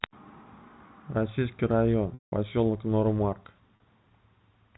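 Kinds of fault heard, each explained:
Packet loss with pitch repetition: lost audio is patched by repeating the last pitch cycle; the 40 ms gap just buzzes, and the 180 ms one fades out.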